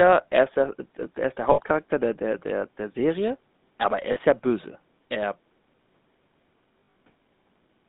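Speech recording carried over a GSM full-rate codec for its whole length, with a buzzy, gravelly roughness that is plainly audible. The band runs only from about 150 Hz to 3.7 kHz, which fits the 13 kbps full-rate coder. The coder models the vocal tract and excites it with sparse, regularly spaced pulses, which produces the grit. A spectrogram shows a hard ceiling near 3.7 kHz, an empty band below 150 Hz, and coarse, smeared harmonics. Lost GSM frames appear at 1.52 to 1.61 s (60 ms) and 4.12 to 4.18 s (40 ms). Their lengths suggest three and two 20 ms frames. A scattered cluster from 6.80 to 6.96 s spans about 160 ms, with its longest gap around 70 ms. In each case the decoder repeats the last good frame's parameters, so the sound hangs as a rough, metallic ring. On a spectrogram this looks like frozen, repeated spectral slices, and on the waveform like a short stretch of uniform periodicity.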